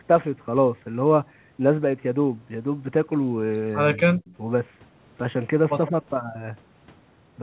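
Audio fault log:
3.97–4.3 s and 5.9–5.95 s, speech suppressed in double talk: the speech level dips sharply in short pieces, together about 200 ms in the first span, falling as much as about 20 dB, then only about 5 dB over roughly 50 ms in the second. The likely cause is the echo canceller mistaking simultaneous far-end activity for its own loudspeaker echo and attenuating the near-end talker along with it.
4.26–4.33 s, echo leak: a faint delayed copy of the speech, trailing by 155 ms and sitting about 30 dB below the direct sound, slips through briefly as the first suppression span ends. This is likely residual loudspeaker pickup that the far end's echo canceller failed to remove and sent back, heard within the telephone-band audio that stops at 4 kHz.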